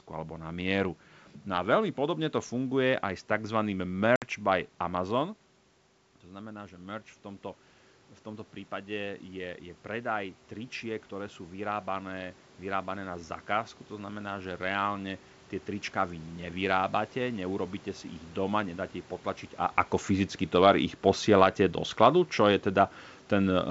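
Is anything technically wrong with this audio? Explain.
Yes, there are two faults.

Packet loss on an ADPCM call occurs at 4.16–4.23 s, right after "funguje aj s tzv". About 60 ms of audio, a few packets' worth, is replaced by a hard-edged silent gap. Because the decoder's adaptive predictor and step size lose sync with the sender's, the speech returns slightly distorted, then settles within tens of milliseconds.

Automatic gain rising runs from 6.24 to 16.3 s. The input drops by about 12 dB, and the automatic gain control responds by gradually raising its gain by about 10 dB. The voice and the room noise behind it swell together, slowly, over several seconds.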